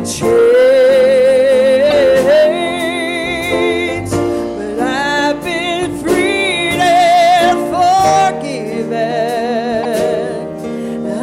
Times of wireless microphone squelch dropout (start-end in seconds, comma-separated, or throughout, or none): none